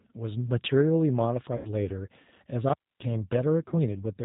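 The whole clip runs through a G.729 codec, and you can plainly hear it: nothing above 4 kHz survives, and the speech comes out slightly rough and synthetic, the way a filter-plus-pulse model rebuilds a voice. It's consistent with the 8 kbit/s G.729A variant.

From 1.57 to 1.71 s there's VoIP packet loss concealed by the speech codec. About 80 ms went missing, which fits four 20 ms packets, so the decoder stretched its last pitch and filter into a fading buzzy tone or coloured noise. The voice then stays a bit weak and off as it recovers. The same thing happens more briefly from 3.68 to 3.75 s, where roughly 40 ms was lost.

Between 2.69 and 3.05 s an intermittent contact drops the sound out for about 0.27 s, with crackle at both edges and only faint hiss in the gap, like a loose plug briefly opening the line.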